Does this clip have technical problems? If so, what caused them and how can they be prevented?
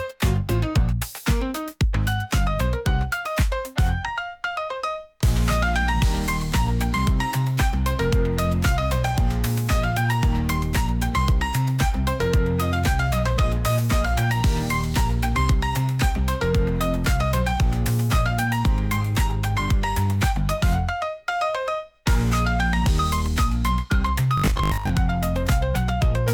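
Yes. From 24.38 to 24.90 s, new audio likely arrived too seldom, so playback kept looping a short stretch, which fits a 20 ms buffer, in place of most of the real signal. The result is robotic sound from repeated short buffers, a rigid, metallic 50 Hz buzz imposed on the sound. A larger buffer, and a steady enough data supply that the audio path never runs dry, prevents it.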